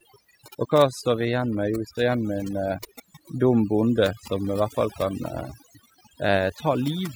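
Speech marred throughout by overdone noise removal: bands near the estimated noise floor are cut, leaving near-silent gaps with twinkling specks, unlike steady hiss.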